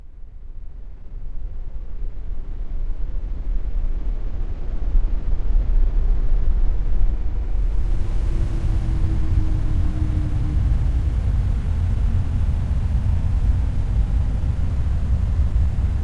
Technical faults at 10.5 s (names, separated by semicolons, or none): none